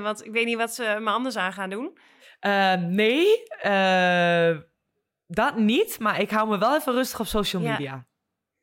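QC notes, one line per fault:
Nothing to flag on this one; the speech comes through without a single problem worth noting.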